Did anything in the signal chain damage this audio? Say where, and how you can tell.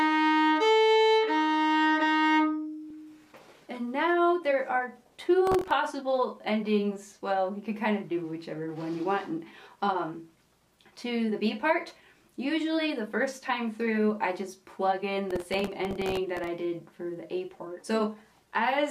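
Yes. Processor overload crackle at the driver or buffer stage: gritty tearing from 5.47 to 5.71 s and again from 15.31 to 16.47 s. Buffer deadlines were missed repeatedly, each miss replaying a scrap of old audio with hard edges. The fine texture fits very short buffers of a millisecond or two.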